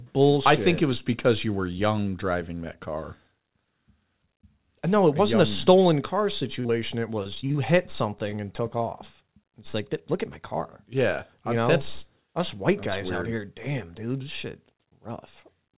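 From 6.6 to 7.56 s, just after "stolen car", the speech turns choppy and robotic, with pieces missing. This is repeated packet loss: roughly nine holes, the longest 45 ms, were patched by extending the last sound. About 20% of the stretch is filled in this way, and 120 ms of audio is gone.

At 8.30 to 8.34 s, just before "and took", a sound is held slightly too long with a faint buzz or dip. This is a short stall from a late packet: the jitter buffer ran dry, the receiver stretched the audio for 19 ms, and then it resumed with nothing lost.

From 9.71 to 9.75 s there is a brief smear or wobble. This is a short concealed packet loss: 20 ms of audio never arrived in time, and the receiver bridged the gap by continuing the preceding sound before blending back. Throughout, the G.711 call path leaves nothing above 4 kHz.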